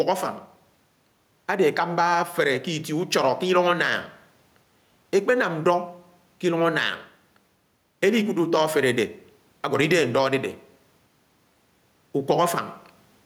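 Throughout the speech, gain pumping is present, likely from the input gain being set far too high with a fast limiter clamping down on every loud syllable. The room noise, about 45 dB below the speech, is part of the recording, and the gain swings by around 5 dB, squashing the level.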